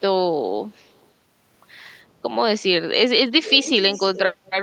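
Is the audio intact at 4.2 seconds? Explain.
No. From 3.93 to 4.21 s an echo leak is heard: a faint, delayed copy of the speech, roughly 15 dB below it, trailing by about 318 ms. The likely cause is a far-end loudspeaker whose echo canceller let some of its microphone pickup through.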